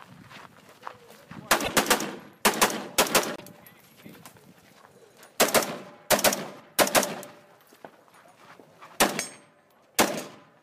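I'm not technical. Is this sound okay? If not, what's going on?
No. There are two short glitches, from 1.63 to 1.70 s and from 3.36 to 3.42 s, where the sound briefly breaks up and skips forward. The likely cause is a broken MP3 bit reservoir. MP3 files save space by letting each small chunk store some of its data inside the chunks before it. Here some chunks seem to be missing, so the next ones look back for their data, find the wrong bytes, and play a brief garbled moment.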